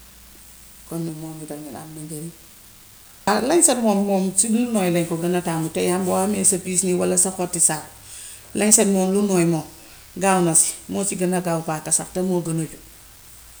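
From the first moment to the last, there's an unreliable data bit in the speech. One data line is flaky, so its bit comes out wrong in a random scatter of samples, and every error is a spike of the same size, around -34 dBFS. You hear it as a steady fizzy crackle riding under the talking, and since it has nothing to do with the signal, it carries right on through the pauses.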